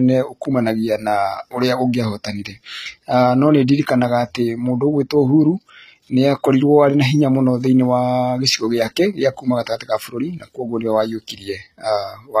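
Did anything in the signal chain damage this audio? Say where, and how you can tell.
Yes. The codec stage, throughout: likely HE-AAC compression at a bitrate near 20 kbps. Its copied-up treble stops at 14.9 kHz and leaves s sounds gritty and lispy.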